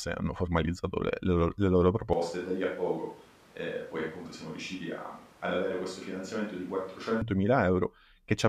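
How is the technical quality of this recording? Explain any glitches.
The recording has one clear fault. From 2.13 to 7.22 s the speech suddenly turns roomy, hollow and thinner in the bass, about 5 dB quieter, with background noise rising to roughly 25 dB below the speech. This is most likely a switch to a distant microphone, with a farther pickup replacing the close one. Unlike added reverb or an EQ change, the room noise rises along with the tone change, and both the change and the return are abrupt.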